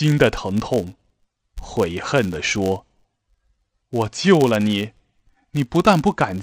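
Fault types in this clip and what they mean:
Filter restarted on every block: the filter loses its memory at each block boundary and restarts from silence, leaving a small transient every 10 ms, heard as a 100 Hz buzz tracking the speech level; waveforms show regular spikes, spectrograms vertical lines with harmonics every 100 Hz.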